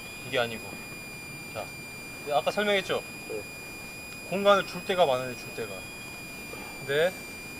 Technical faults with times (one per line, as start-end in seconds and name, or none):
0.00-7.60 switching supply whistle